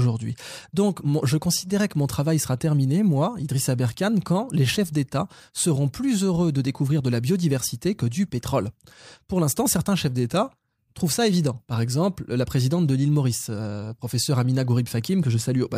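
Nothing here needs flagging: the speech runs its whole course without a single technical fault to point to.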